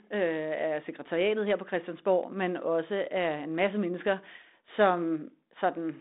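The speech comes through a G.726 ADPCM telephone path at 32 kbit/s, its band running from 250 Hz to 3.7 kHz with nothing above 3.8 kHz, and there are no technical faults in the signal.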